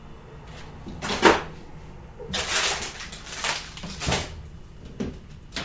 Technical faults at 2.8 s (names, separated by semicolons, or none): none